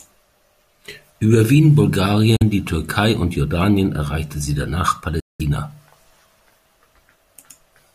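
Speech, with two brief holes where the sound cuts to silence: 2.36 to 2.43 s (about 43 ms) and 5.20 to 5.41 s (192 ms). The likely cause is a Bluetooth dropout, where packets reached the headphones too late and were discarded. On a waveform each gap is a flat line. A spectrogram shows an empty vertical band across all frequencies. Afterwards the speech picks up as though it had kept playing underneath.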